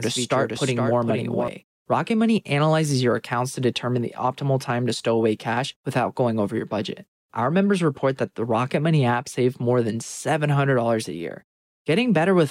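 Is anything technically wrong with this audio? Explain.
Yes. From the start to 1.48 s, a doubled audio track: an undecayed, full-band copy trails about half a second behind, roughly 5 dB quieter, likely from a second, slower capture path.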